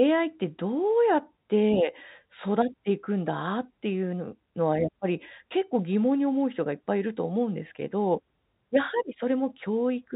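No technical faults can be heard in this speech.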